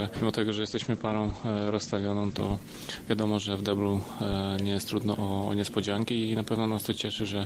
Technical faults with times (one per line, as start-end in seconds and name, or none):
0.54-3.37 call bitrate drop